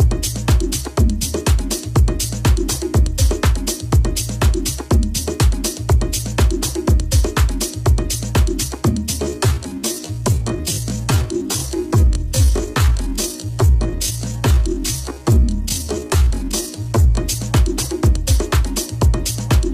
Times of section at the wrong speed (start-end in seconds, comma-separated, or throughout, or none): none